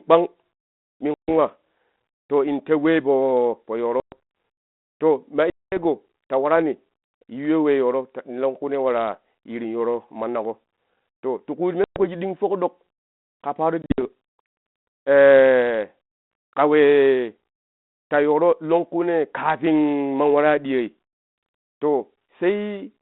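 Packet loss on an ADPCM call cuts the speech at 1.14, 4.0, 5.5, 11.84 and 13.82 s. The gaps are 120 to 220 ms, and the last is broken up over 160 ms. Each shows as hard-edged blank blocks. The decoder's predictor and step size, thrown out of step, bring the speech back slightly distorted for tens of milliseconds.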